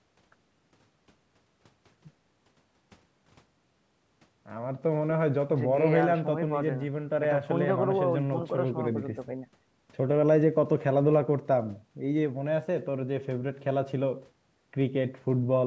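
Nothing stood out on listening to this speech, which shows only the expected shaping of call microphone processing, with nothing above 8 kHz and the lowest bass trimmed away.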